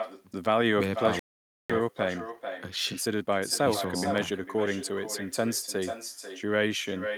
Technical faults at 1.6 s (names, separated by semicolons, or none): echo with no canceller; playback stall; time-compressed catch-up